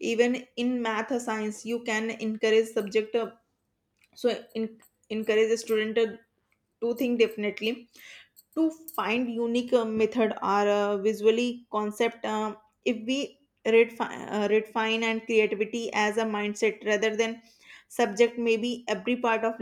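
A recording of speech with no technical fault to report: level, timing and continuity hold steady throughout, with no dropouts, glitches or distortion anywhere in the signal.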